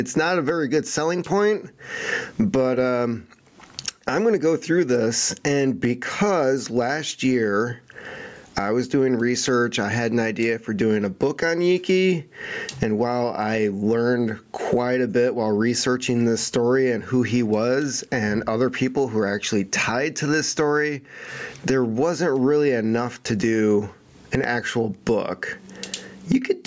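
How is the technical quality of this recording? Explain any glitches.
The recording is marred by gain pumping that runs through the whole clip. Throughout, the gain swings by around 25 dB, leaving the speech squashed and flat in level. The likely cause is input gain set far too high, with a fast limiter or compressor clamping down on each peak and releasing in the gaps. The call-style microphone processing leaves nothing above 8 kHz.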